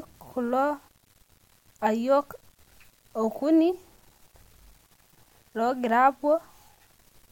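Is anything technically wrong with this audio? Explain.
Yes. Low bit depth without dither runs throughout the speech: a grainy distortion tracks the signal, roughening quiet passages and sputtering on the faintest tails. This likely comes from rounding to very few levels, which fits 8 bits, leaving error roughly 40 dB below the signal.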